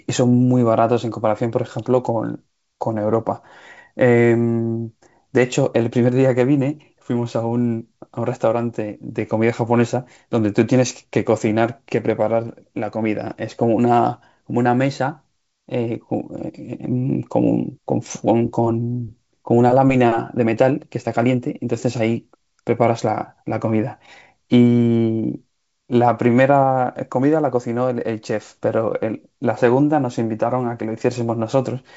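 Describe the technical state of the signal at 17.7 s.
At 17.7 s the audio is intact, with the speech passing through G.722 wideband telephone coding at 64 kbit/s and nothing above about 7.7 kHz.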